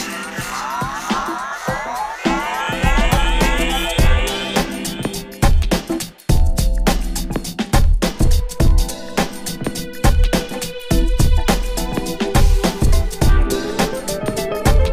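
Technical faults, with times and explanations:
No technical faults are heard.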